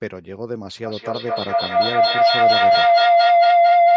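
A microphone-to-loudspeaker loop gaining level each pass causes feedback howl from 0.83 s to the end: a tone around 700 Hz, pulsing about every fifth of a second, climbing to about 13 dB above the speech.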